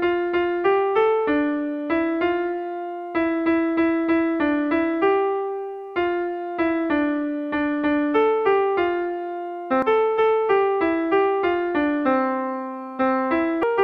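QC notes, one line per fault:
9.82 s and 13.63 s, damaged data in a compressed stream: two brief chirps or blips where corrupted bytes in the compressed stream are misread by the decoder. It loses frame sync and garbles the output momentarily while it hunts for the next valid frame header.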